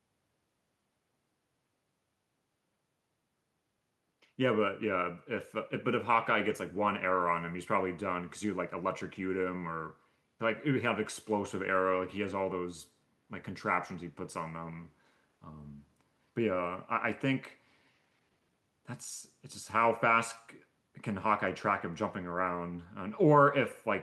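Throughout the clip, the far end plays the call over a loudspeaker and its microphone captures it again, with no echo canceller removing it: an echo with no canceller. Each phrase returns roughly 150 ms later as a faint, thin copy, about 29 dB below the speech.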